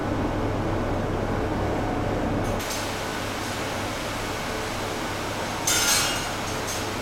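From 2.6 s to the end, pre-emphasis is left on: a treble boost applied for transmission never received its matching de-emphasis, consistent with a J.17 curve. The top end sits about 11 dB hotter at 10 kHz than at 1 kHz, so the audio turns thin, bright and hissy. A spectrogram shows the energy above a few kHz suddenly brightening, and the waveform shows sharper, spikier transients.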